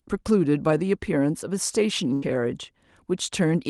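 At 2.13 to 2.23 s, the speech freezes into a held, fading sound, then jumps ahead. This is a burst of packet loss: roughly 90 ms went missing and was concealed.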